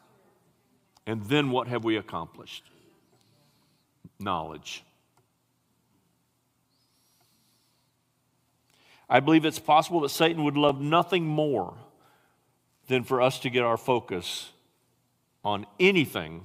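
At 2.67 s, just after "what have we accomplished", a short stutter marks the first of four overlapping chunks joins, repeating at 6.68 s, 10.69 s (just before "nothing more") and 14.71 s (after "to get our focus"). The speech was handled in 4.0 s chunks, each starting 12 ms before the previous one ended, so that 12 ms slice plays twice at every join. It is heard as a brief click-like hiccup at a steady four-second spacing.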